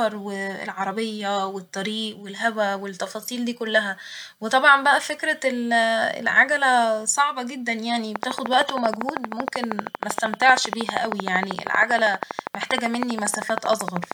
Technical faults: train of clicks

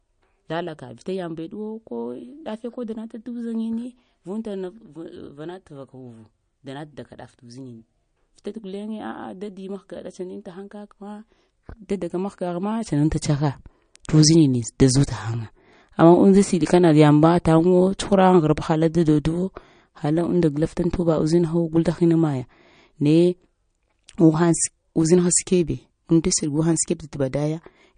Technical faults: MP3 compression

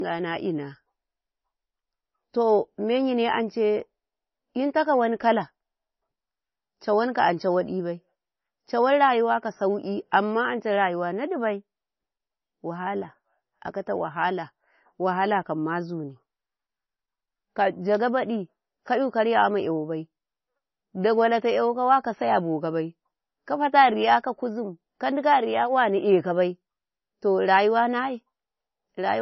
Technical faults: low-bitrate audio saved at a high bitrate

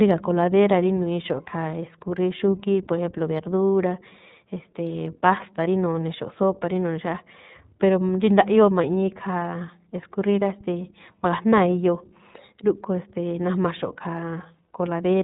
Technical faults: iLBC codec; lost iLBC frames

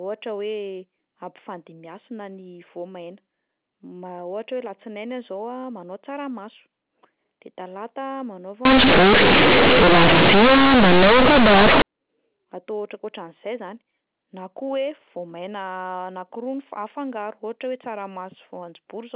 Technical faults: companded audio read as linear

